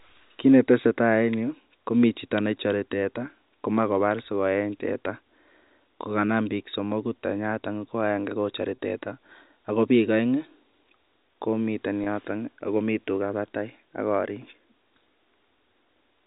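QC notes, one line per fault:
8.76–8.78 s and 12.04–12.06 s, packet loss with pitch repetition: a single 20 ms packet went missing each time, just after "tenyaton ko agenge kochore" and just before "yoton akomii tugaa batai". The receiver looped the last pitch period, so each gap sounds like a brief buzzy hold. On the waveform it appears as identical repeated cycles, and on the spectrogram as flat, unchanging harmonic stripes. The G.711 telephone band above it stops at 4 kHz.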